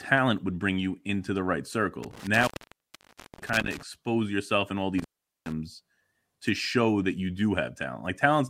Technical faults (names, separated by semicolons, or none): intermittent contact